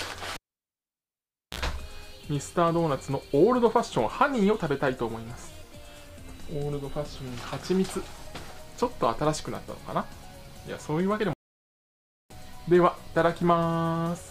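At 0.34 s a cable pulled and plugged in: a pop, 1.2 s of near silence, then a 49 ms burst of 60 Hz mains buzz and a second pop at 1.59 s.

From 11.33 to 12.30 s a playback stall leaves 0.97 s of silence, likely the player running short of data.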